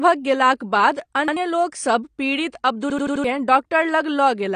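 Throughout, the speech is dull and smeared with nothing above 9.7 kHz, consistent with AAC compression at likely around 32 kbps. At 1.28 s, just before "लोक सब पीड़ित", a repeated buffer replays an 85 ms slice once, consistent with a 4096-sample buffer. At 2.90–3.24 s, after those words, an 85 ms slice stutters four extra times, losing about 300 ms.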